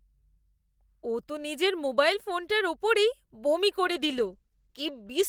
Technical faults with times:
3.87-5.29 call bitrate drop

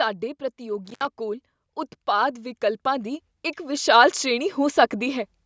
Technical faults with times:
0.85-1.05 intermittent contact
2.05-5.33 automatic gain rising

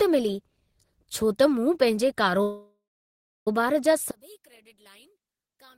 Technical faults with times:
2.42-3.48 call audio freeze
4.11-5.78 one channel inverted

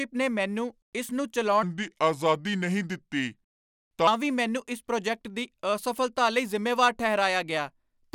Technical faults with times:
1.63-4.07 section at the wrong speed

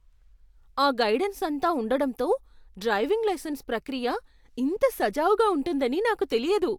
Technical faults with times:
none

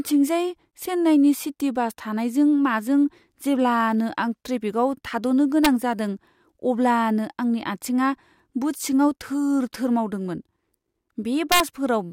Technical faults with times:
5.65 integer overflow
11.52-11.60 integer overflow

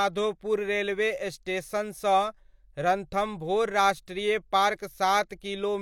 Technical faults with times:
5.29-5.41 pre-echo

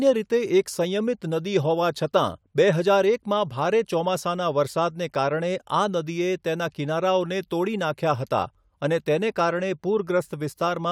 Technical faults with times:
none

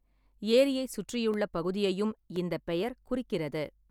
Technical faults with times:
0.32-2.36 periodic USB or driver dropouts

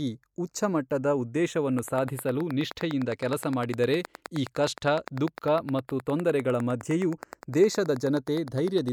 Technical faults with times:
0.00-8.93 channels drifting apart
1.79-8.89 train of clicks

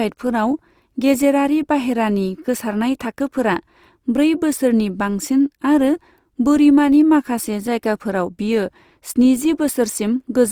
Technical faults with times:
0.00-10.51 Opus compression

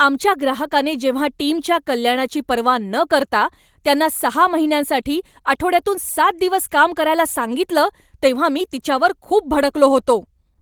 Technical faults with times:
none

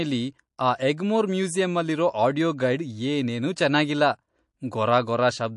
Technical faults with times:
0.00-5.57 MP3 compression

